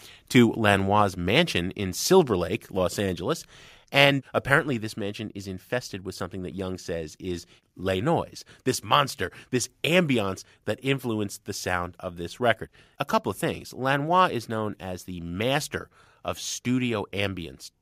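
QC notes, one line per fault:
1.02 s, microphone volume stepped down: speech and background drop about 2 dB at once just before "mansion in", likely the call software lowering input volume.
3.06 s, microphone volume stepped down: a further sudden level drop of about 1 dB across voice and background, likely another single-step cut to the device's input volume.
4.00–4.04 s, microphone overload: peaks flatten at the converter limit, roughly 1 dB over, adding a brief harsh crackle to the loudest syllable, likely from excessive input volume.
4.59 s, microphone volume stepped down: level falls about 2 dB in one step right before "this mansion is infested", likely the software reacting to the preceding clipped peak.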